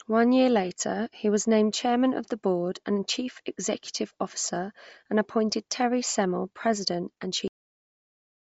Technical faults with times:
0.00-8.47 Bluetooth LC3 compression
7.48-8.47 cut-off end

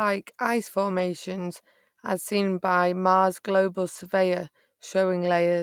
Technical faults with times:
0.95-1.01 lost packet rebuilt from error correction
3.95-4.05 lost packet rebuilt from error correction

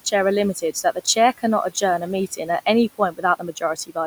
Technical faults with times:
2.98-3.97 speech cut by the noise suppressor

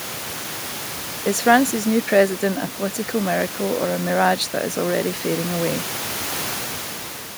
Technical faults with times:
none

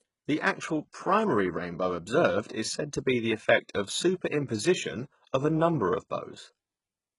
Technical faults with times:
0.00-7.18 HE-AAC compression

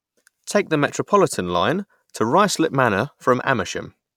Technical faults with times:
none

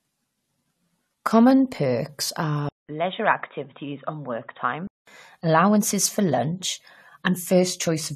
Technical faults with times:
2.69-5.07 input switched to a poorer device

